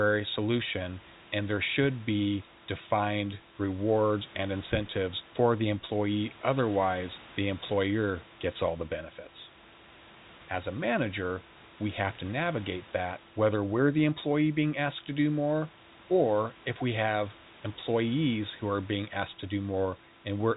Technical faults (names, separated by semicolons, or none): none